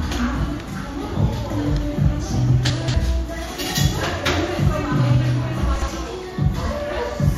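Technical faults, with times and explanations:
2.70–2.94 s and 5.76–5.88 s, chunks out of order: a block of what sounds like 60 ms arrived late and played after its successors, jumbling the sound at the hard joins.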